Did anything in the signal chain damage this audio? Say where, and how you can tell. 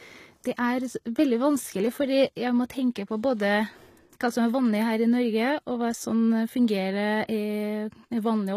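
Yes, at the codec stage, throughout the speech: the treble is bright but synthetic, s sounds turn gritty and metallic, and nothing sits above 14.9 kHz. The cause is likely HE-AAC compression, at a rate that fits about 20 kbps, copying lower bands upward rather than simply cutting them as a low-pass filter would.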